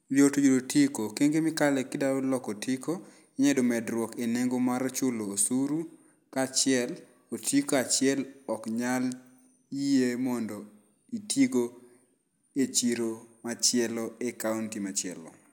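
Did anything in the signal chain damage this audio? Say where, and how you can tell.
No, nothing along the chain from capture to playback audibly damaged this speech recording.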